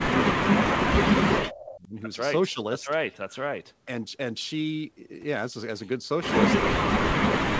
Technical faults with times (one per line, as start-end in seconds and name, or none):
0.00-1.01 speech suppressed in double talk
0.06-0.15 echo leak
1.44-1.95 speech suppressed in double talk
1.55-1.74 echo leak
6.61-7.60 speech suppressed in double talk